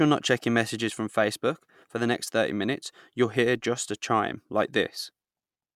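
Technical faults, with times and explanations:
No technical faults can be heard in this speech recording. There is nothing here that needs a time or an explanation.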